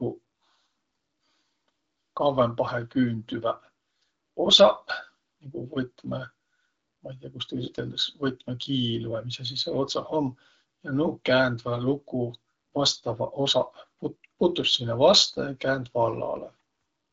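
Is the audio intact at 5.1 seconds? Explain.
Yes, at 5.1 seconds the audio is intact, with nothing beyond the light dulling of the AMR wideband (HD Voice) codec running at 12.65 kbit/s.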